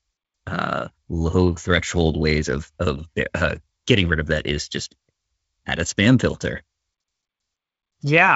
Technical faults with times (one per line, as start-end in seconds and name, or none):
none